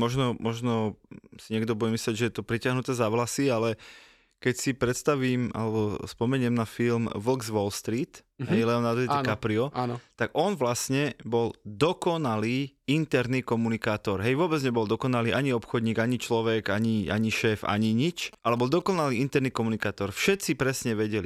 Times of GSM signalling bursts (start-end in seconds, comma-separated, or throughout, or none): 18.33-19.05